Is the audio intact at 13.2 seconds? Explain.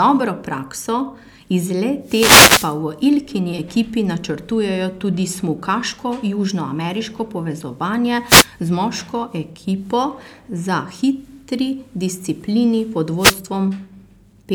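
No. At 13.2 seconds the speech is caught by a wireless microphone noise hit, running from about 13.17 to 13.38 s, roughly a fifth of a second. The analogue FM radio link fades as reflected signal paths cancel at the receiver, so receiver noise climbs and breaks through. It is heard as a brief swish of static laid over the voice, partly masking it until the signal recovers.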